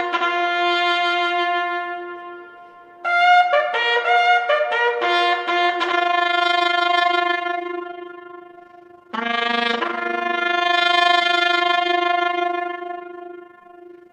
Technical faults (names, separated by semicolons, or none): overlap-add ripple